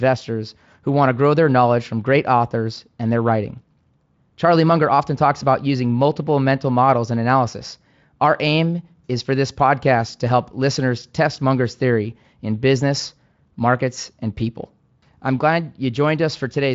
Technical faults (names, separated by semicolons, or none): none